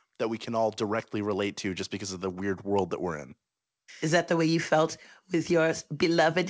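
Nothing stood out on listening to this speech, which comes over a call path whose sound has no content above 8 kHz, as a G.722 link would give.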